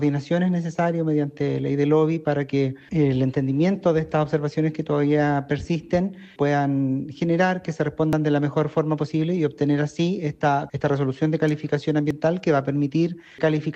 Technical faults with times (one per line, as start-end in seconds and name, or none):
8.13 overlap between stream segments
11.48-11.51 electrical switching spike
12.11 overlap between stream segments